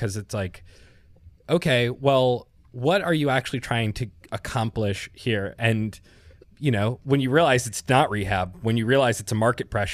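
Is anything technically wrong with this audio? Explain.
No, nothing technically wrong stood out on listening to this speech recording.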